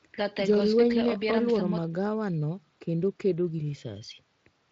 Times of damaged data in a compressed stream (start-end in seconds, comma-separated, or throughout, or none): none